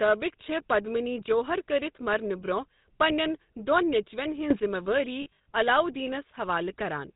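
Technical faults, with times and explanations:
Throughout, GSM full-rate codec: the speech carries a plainly audible buzzy, gravelly roughness. The codec rebuilds the vocal tract from a filter excited by coarse, regularly spaced pulses, consistent with 13 kbps, and nothing above 4 kHz survives, so the top end sounds dull and grainy.
4.51 to 4.60 s, sudden gain jump: for roughly 90 ms the speech and its background noise step up together by about 12 dB, with no ramp in or out. This is likely a digital gain setting changing instantly from one sample to the next.
5.22 to 5.46 s, lost GSM frames: across about 240 ms, 160 ms of audio goes missing in scattered gaps, the longest around 70 ms. Each gap is filled by repeating the last good frame, so the sound hangs as a rough, metallic ring.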